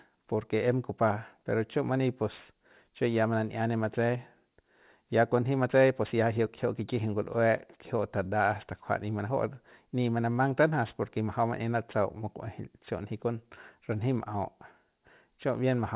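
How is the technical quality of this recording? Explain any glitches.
The recording's technical quality is compromised by aliasing, present across the whole speech clip. The sound points to a drop from a 48 kHz original to an 8 kHz rate with no anti-alias filter in between. Everything above 4 kHz folds back down into the band, landing at unrelated frequencies. Sibilants turn gritty and metallic, with spurious tones sitting roughly 30 dB under the speech. A properly filtered 8 kHz conversion would simply sound dull, with nothing above 4 kHz. Here the top of the spectrum stays busy right up to that edge, filled with harsh content that doesn't track the voice.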